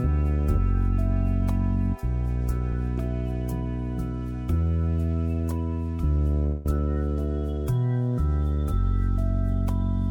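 At 6.46 s the sound stalls for about 191 ms, to 6.66 s, held as a fading buzz or hiss rather than silence, then resumes where it stopped with nothing lost. This is a call audio freeze, likely from delayed packets draining the jitter buffer.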